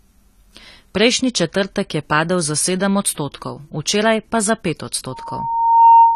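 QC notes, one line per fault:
Throughout: AAC compression, likely the cause of the dull, smeared speech with a watery, fizzy edge on sibilants. Nothing survives above 13.9 kHz, and the damage is plainly audible, which fits a low-bitrate AAC-LC encode around 32 kbps.
5.11 to 6.15 s: loudspeaker feedback squeal, a single 922 Hz tone that swells over roughly three-quarters of a second until it sits about 10 dB above the speech. The mic is picking up its own speaker, and the loop keeps reinforcing that one frequency.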